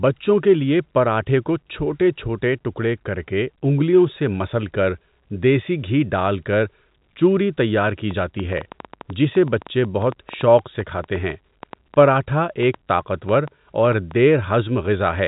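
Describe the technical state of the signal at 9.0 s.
At 9.0 s the speech is overlaid by a train of clicks running from 7.87 to 14.12 s: some forty irregular pulses at about 6.7 per second, peaking a little above the speech, most likely from electrical interference or a struggling interface. They are heard through the telephone-band audio, which ends near 3.8 kHz.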